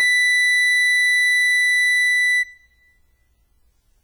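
Across the whole music clip, heavy WMA compression damage is audible, likely from encoding at a bitrate that fits about 24 kbps. Long transform blocks smear quantisation noise over tens of milliseconds and drop weak components, so the sound rings and washes, with hiss pumping alongside the signal.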